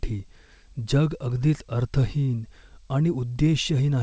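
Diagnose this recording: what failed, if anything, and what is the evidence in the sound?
Nothing failed; the call path simply stops above 8 kHz.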